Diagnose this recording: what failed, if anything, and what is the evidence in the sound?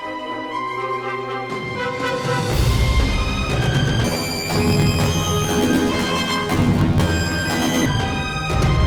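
From 4.04 s to 7.86 s the sound turns into a robotic buzz at about 42 Hz and sits an octave high. That points to the sample-format conversion stage: planar audio read as interleaved. Each 24 ms block holds all of one channel's samples followed by all of the other's. Read as alternating pairs, each block plays its two halves back to back at double speed. Pitch jumps 12 semitones, and the block boundaries produce the buzz, while overall timing stays intact.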